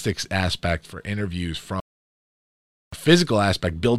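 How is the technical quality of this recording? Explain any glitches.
The recording has one clear glitch: an audio dropout to silence from 1.80 s to 2.93 s, removing about 1.12 s of the speech. The signal cuts off mid-flow and the gap is silent, with no room tone or noise floor underneath, before the speech resumes just as abruptly. That pattern points to the input itself disappearing, likely a momentary disconnect, link failure or mute, while the recorder kept writing silence, so whatever was spoken in that interval is unrecoverable.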